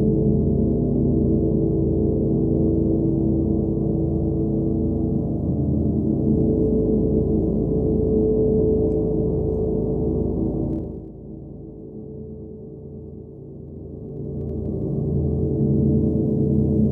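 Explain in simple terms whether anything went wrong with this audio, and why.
Zipper noise at 10.69 to 11.09 s and 13.64 to 14.87 s: the volume moves in small, unsmoothed steps, each leaving a tiny click, so the sound ticks while fading down, then while rising.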